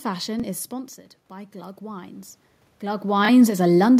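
At 0.40 to 0.43 s a Bluetooth stutter occurs. A packet in the wireless link arrived late or not at all, so the receiver replayed its last buffer to fill the gap. That gap is about 23 ms long, which points to a single lost packet. It is heard as a brief doubled slice of the speech, a tiny hiccup, before the audio jumps ahead as though it had kept playing through the gap.

From 0.69 s to 3.56 s the automatic gain is rising. The speech level at the microphone dropped by about 12 dB, in step with the talker moving away around 0.5 s. The gain control read this as too quiet an input and slowly pushed its gain up by about 9 dB to compensate. Over nearly three seconds the voice gradually swells back, and the room noise behind it climbs by the same amount, so the background rises with it.

At 3.25 to 3.29 s a second Bluetooth stutter appears, again covering about 23 ms and consistent with one dropped packet. 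The receiver repeats its last buffer, producing the same short stammer, and the speech resumes slightly further on. It falls inside the gain rise, after the talker's second movement around 3.0 s.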